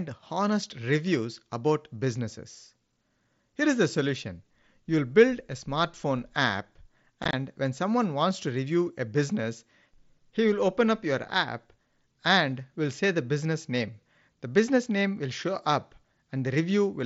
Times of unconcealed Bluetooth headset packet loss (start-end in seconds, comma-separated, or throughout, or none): 7.23-7.33